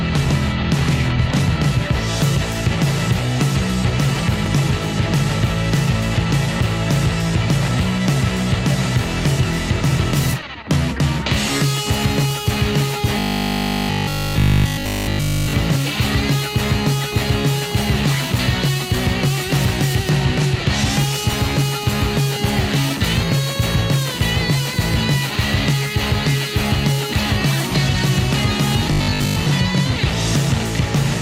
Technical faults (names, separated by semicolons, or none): overlap between stream segments; robotic sound from repeated short buffers